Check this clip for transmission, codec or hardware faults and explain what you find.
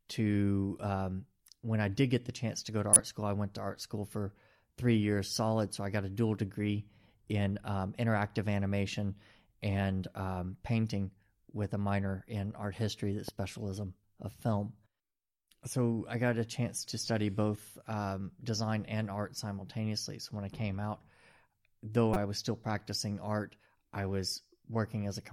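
Two kinds of fault show up in the speech: decoded corrupt frames and one loud pop.

Corrupt frame decoded, at 2.93 to 3.00 s and 22.14 to 22.16 s: bit errors in compressed frames scrambled the gains and codes, so the decoder put energy at the wrong frequencies. The first spans about two frames and peaks around -5 dBFS; the second is a quieter single frame, peaking around -15 dBFS. On a spectrogram each appears as a short, frame-wide block of misplaced energy.

Loud pop, at 13.28 to 13.31 s: a sudden voltage pulse, likely from a plug, switch or static discharge, sits about 10 dB above the speech, which continues underneath. In the waveform it is a sharp spike; in the spectrogram, a thin vertical broadband line.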